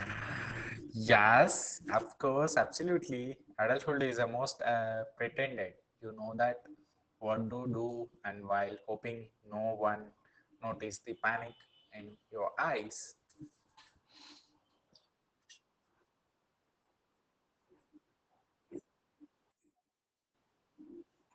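Speech, and it's been squeezed hard through Opus voice compression for the whole run. The muffled, hoarse, slightly robotic quality is what SILK's linear-prediction coder gives you when it's starved, and it sounds like something around 10 kbps in wideband mode. At that rate the excitation gets coded so coarsely that the voice loses its natural texture and the top end is cut back to 8 kHz. Then from 19.52 to 20.35 s the level drops by about 20 dB, leaving a faint remnant. That's most likely one channel inverted: with one side's polarity flipped, everything common to both channels cancels in a mono sum, and the centred voice largely disappears until normal playback returns.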